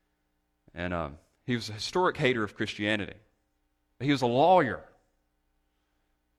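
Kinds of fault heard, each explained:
No technical fault can be heard anywhere in this speech recording.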